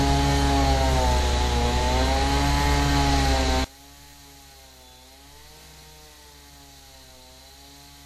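A recording of sounds: from 3.65 s to the end, the level falls by about 27 dB to a faint residue, likely one channel inverted cancelling in mono, unlike a dropout's silence.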